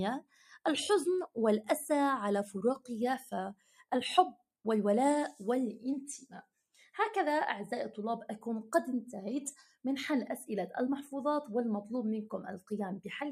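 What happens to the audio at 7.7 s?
At 7.7 s you're hearing the noise suppressor applied to music or sounds, active across the whole clip: it treats sustained sound as noise, dipping it by roughly 5 dB, so it pumps.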